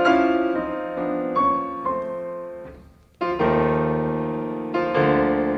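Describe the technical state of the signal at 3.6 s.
At 3.64 s there's a single sharp click, and it's likely dropped samples: roughly one sample goes missing, so the waveform jumps straight to a later value. That's far too brief to lose any sound, just a thin vertical line across the spectrum.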